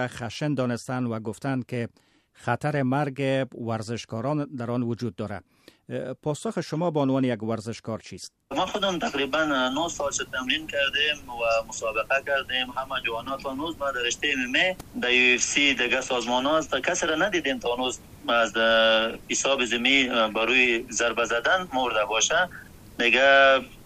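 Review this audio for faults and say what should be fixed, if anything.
No faults turn up in this audio, so nothing needs to be fixed.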